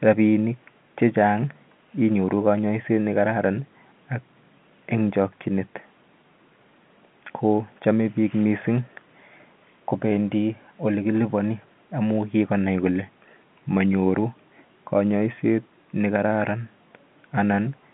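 There are no technical faults to describe in time order; the speech comes over an ordinary telephone line that carries nothing above 3.8 kHz.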